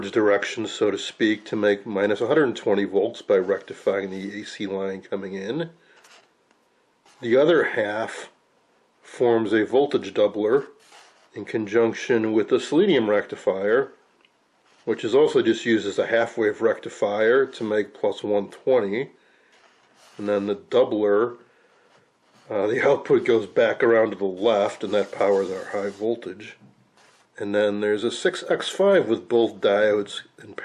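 No technical faults can be heard anywhere in the recording, and the signal stays steady and intact throughout.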